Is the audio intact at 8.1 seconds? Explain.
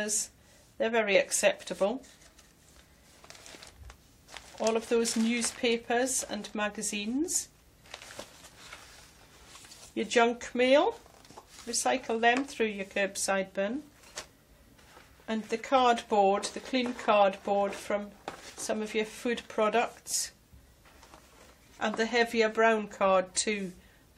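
Yes, the audio at 8.1 seconds is intact, with no dropout, click, distortion or other fault at that moment.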